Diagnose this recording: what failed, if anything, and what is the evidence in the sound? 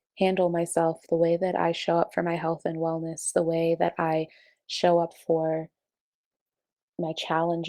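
Nothing failed, and there is no evidence in the sound of a fault at any stage.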